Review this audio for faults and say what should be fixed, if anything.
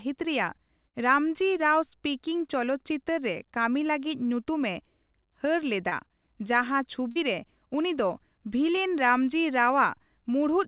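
Burst of packet loss, 0.88 to 0.96 s: about 60 ms of audio went missing in a row, and the receiver covered roughly 54 ms of it by extending the last sound and letting it fade. You hear a held buzz or dying hiss before the speech picks up again a little further on, with the stretch in between gone. To prevent it, use a jitter buffer with more headroom and add forward error correction or redundancy so a run of lost packets can be rebuilt.

Short concealed packet loss at 5.89 to 5.93 s, 7.11 to 7.18 s and 8.76 to 8.79 s: brief gaps of about 20, 40 and 20 ms never reached the decoder in time. The receiver filled each one by continuing the preceding sound, pitched or noise-like, then crossfaded back into the real audio. This leaves a short smear or wobble, and a quick consonant may drop out. The narrow band with nothing above 4 kHz fits a G.711 A-law call path. To prevent these gaps, give the network path more stable delivery or enable packet redundancy so isolated losses are recovered rather than guessed.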